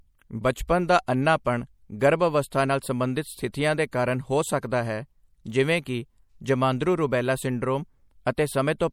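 Speech throughout carries plainly audible MP3 compression artefacts, a watery, swirly texture on sibilants, likely from a low-bitrate encode that fits about 64 kbps. Pre-echo, a short hiss of 14 to 18 ms smeared ahead of sharp attacks, appears at 0.67 s just before "ਦਾ ਅੰਨ੍ਹਾਪਣ", 1.07 s, 3.52 s after "ਅਵਸਥਾ ਨਾਲ ਸੰਬੰਧਿਤ", 3.91 s and 8.25 s after "ਰੁਬੈਲਾ ਸਿੰਡਰੋਮ". The codec spreads each block's noise back into the quiet gap before these attacks.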